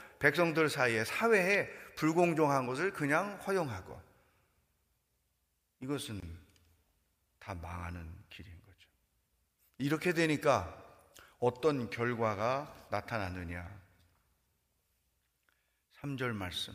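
At 6.2 s the speech drops out for about 24 ms, through 6.23 s, then picks up exactly where it left off. That's a gap at a join of encoded pieces: two separately encoded sections were spliced without trimming, so the start-up delay of one encoder run and the padded final frame of the other both stayed in. You hear it as a short hole with edges smeared by the codec.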